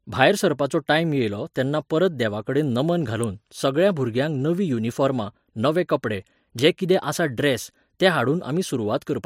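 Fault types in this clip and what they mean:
Electrical switching spike: two sharp snaps sit on top of the speech, at 3.24 s and again at 6.59 s, each over almost instantly. They're likely short arcs from a nearby switch, motor or static discharge that the audio line picked up.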